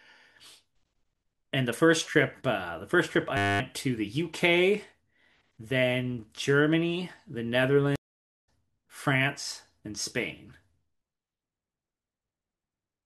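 At 3.37 s the speech locks into a system hang loop until 3.6 s. One 10 ms slice repeats 23 times, a steady buzz at 100 Hz. The driver stalled while the hardware kept replaying its ring buffer. About a fifth of a second of speech is lost.

At 7.96 s a stream reconnect breaks the flow. There are 479 ms of silence, and the disruption ends at 8.49 s. The connection dropped, then a fresh decoder joined mid-stream. The speech resumes roughly 400 ms further on, skipping that stretch.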